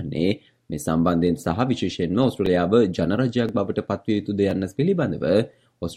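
From 0.41 s to 5.54 s, periodic USB or driver dropouts recur every 1.02 s, about seven in all. Each time a blocked bus or driver skips roughly a millisecond of audio outright, and the splice is heard as a regular tick while sound is present.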